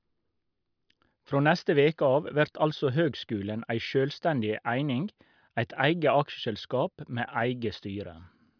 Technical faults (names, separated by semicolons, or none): none